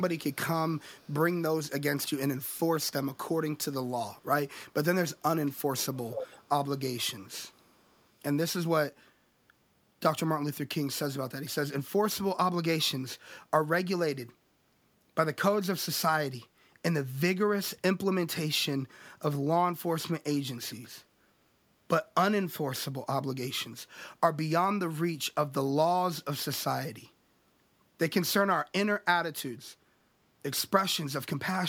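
Echo leak appears in this speech clip at 0.32 s, 0.76 to 1.24 s, 2.43 to 2.55 s, 5.93 to 6.48 s and 7.51 to 8.06 s. A faint copy of the voice trails it by about 484 ms, mostly around 35 to 40 dB below the speech. The 5.93 s stretch is much stronger, only about 10 dB down. This is likely a far-end loudspeaker whose echo canceller failed to remove the sound its microphone picked up.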